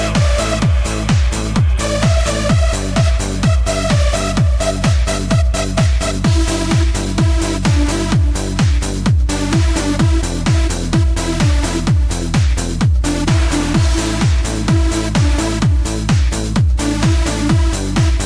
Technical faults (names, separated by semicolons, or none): none